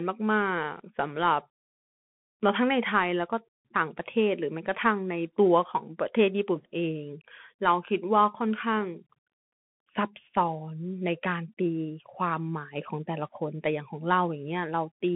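Speech carrying a Bluetooth CVSD headset codec throughout: the spectrogram shows a hard ceiling near 3.8 kHz, while granular hiss and scratchy, slope-limited sibilants fuzz the waveform.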